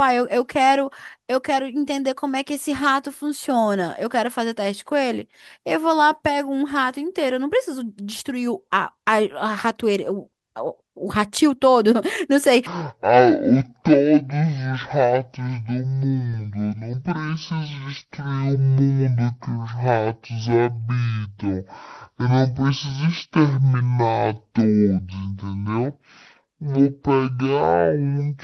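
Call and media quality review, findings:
Speech turns deep and slow from 12.67 s to the end, running at half speed and about ten semitones lower. Section at the wrong speed, likely from playback against a mismatched clock.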